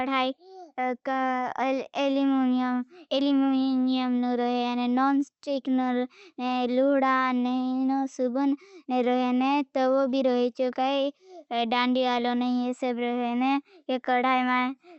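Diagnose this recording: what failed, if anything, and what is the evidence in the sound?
Nothing in this speech recording points to a failure at any stage, from capture through call processing to playback. The WebRTC call path is working as intended, with the Opus codec band-limiting the audio at 8 kHz and the jitter buffer introducing no gaps.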